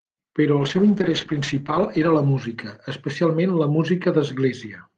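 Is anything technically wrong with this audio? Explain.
Yes. A call bitrate drop affects the speech from 0.61 to 3.43 s. The encoder appears to have been starved of bits, falling to what sounds like about 10 kbps for roughly 1.25 s, so Opus coded coarsely and cut high frequencies. The speech turns rough and muffled until the rate recovers.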